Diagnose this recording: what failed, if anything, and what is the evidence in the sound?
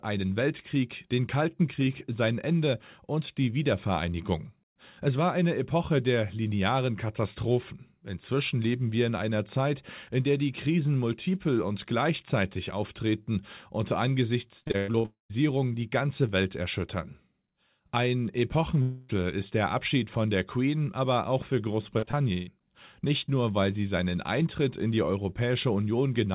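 Choppy stretches appear twice, with pieces of the sound missing. From 14.6 to 15.06 s there are seven short holes, the longest about 0.1 s, and roughly half the span is patched-over filler. From 21.99 to 22.49 s, right after "aber auch für", four holes occur, the longest 0.14 s, with about 44% concealed. This is repeated packet loss at the network stage. The receiver keeps extending the last sound into each gap, and the next gap arrives before the audio recovers, producing the robotic texture.

Two longer breaks follow a different pattern. Directly after the first choppy stretch, from 15.06 to 15.31 s, the sound turns into a fading continuation of the last sound and then drops to about 0.13 s of silence before "die ganze". From 18.81 to 19.11 s, a roughly 0.27 s smeared continuation of the last sound fills the gap before "ist der", with no silence. In both cases speech resumes without the missing audio, which points to a long network dropout as the likely cause.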